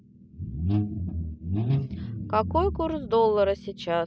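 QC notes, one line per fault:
No faults found on listening; the speech runs without interruption or audible defect.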